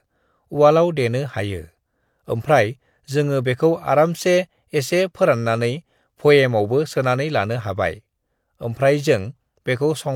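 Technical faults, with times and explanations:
No technical faults can be heard in this speech.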